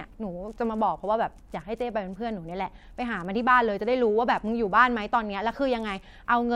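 Nothing here calls for comment, as the speech runs without any technical fault anywhere in the recording.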